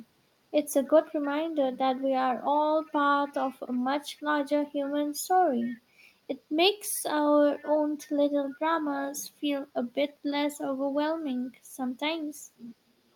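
An echo canceller at the far end, likely one serving a loudspeaker, fails to remove all of its microphone pickup, so an echo leak sends faint scraps of the speech back about 308 ms late. These appear from 2.88 to 2.93 s and from 4.17 to 4.23 s, very quiet, then from 5.63 to 5.79 s and from 7.58 to 7.7 s, stronger but still well under the main speech, as brief ghosts trailing it.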